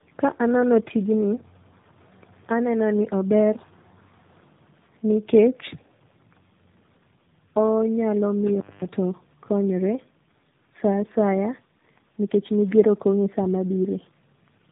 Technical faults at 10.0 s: tandem speech coding

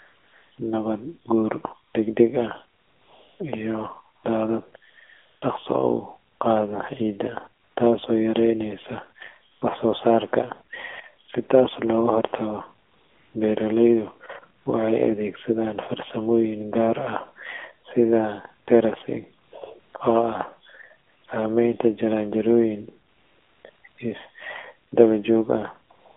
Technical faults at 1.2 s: AMR narrowband mobile codec

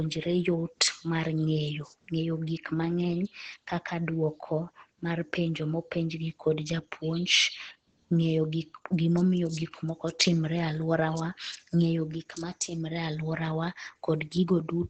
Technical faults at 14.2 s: Opus compression

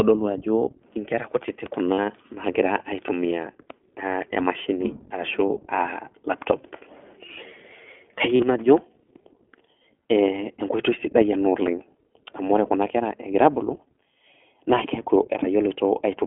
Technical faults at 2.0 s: iLBC codec; lost iLBC frames

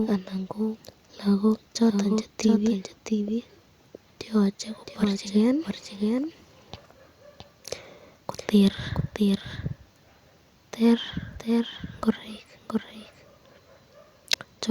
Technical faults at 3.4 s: doubled audio track

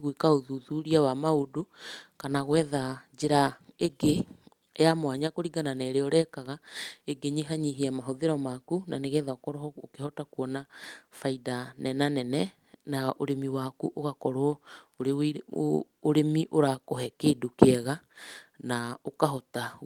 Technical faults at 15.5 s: none

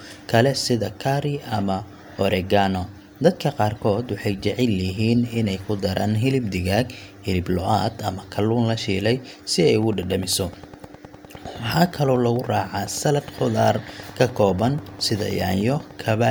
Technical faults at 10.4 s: train of clicks

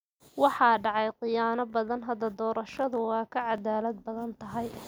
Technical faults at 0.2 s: none

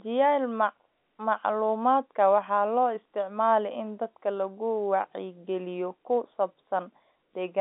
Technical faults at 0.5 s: none

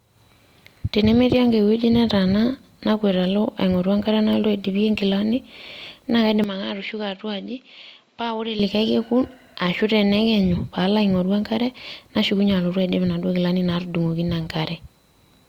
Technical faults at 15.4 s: none

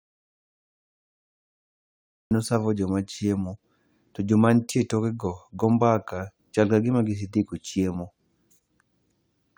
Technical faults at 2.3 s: audio dropout to silence

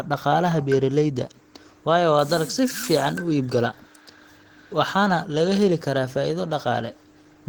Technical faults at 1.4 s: Opus compression

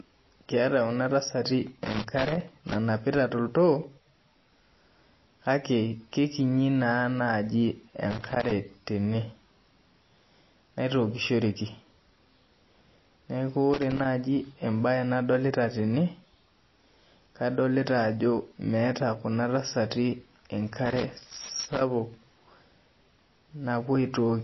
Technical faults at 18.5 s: MP3 compression

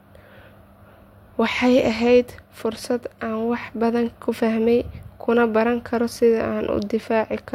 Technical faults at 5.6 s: none

